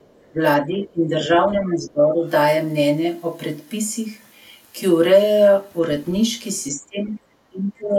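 From 0.0 to 0.3 s a very faint second voice sits far beneath the talker: the other side's voice leaking through, likely because the echo canceller left a residue of the loudspeaker signal in the microphone pickup.

Speech suppressed in double talk follows at 0.32 to 0.41 s, 0.59 to 2.25 s, 6.71 to 7.2 s and 7.49 s to the end. The talker's level dips by about 15 dB in the first two stretches and about 20 dB in the last two, most likely the canceller turning everything down while both sides spoke.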